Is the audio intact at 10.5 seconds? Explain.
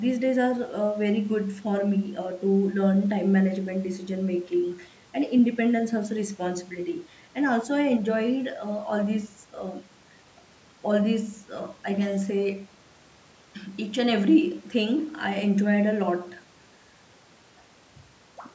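Yes, the speech at 10.5 seconds is intact, with nothing wrong to hear beyond the ordinary call microphone processing, whose high-pass filter trims the lowest bass and whose band stops at 8 kHz.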